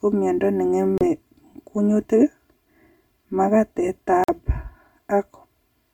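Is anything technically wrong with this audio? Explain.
Yes. There are two faults.

Channel delay with comb filtering runs through the whole speech clip. One channel arrives around 3 ms behind the other, and the two are summed into mono. Content common to both channels cancels at evenly spaced frequencies, with the first notch around 150 Hz and more notches above it. The result is a hollow, phasey tone. The notches stay fixed for the entire clip.

Two brief silences follow the pattern of a Bluetooth dropout, which is the likely cause of both. The first runs from 0.98 to 1.04 s, and the second from 4.24 to 4.30 s. Packets did not reach the headphones in time and were discarded, so the output cut out. When sound returns, it has moved on, as if it had kept playing. About 30 ms of audio is skipped at the first gap, which fits two lost frames. About 46 ms is skipped at the second, which fits three.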